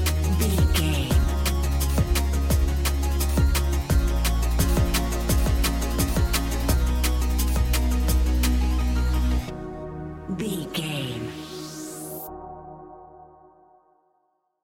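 From about 4.59 s to 6.73 s there's a doubled audio track: a second full-band copy of the sound runs roughly 0.7 s behind, about as loud as the original, with no decay or room colour. It likely comes from a second, slower capture path, and it cuts in and out abruptly.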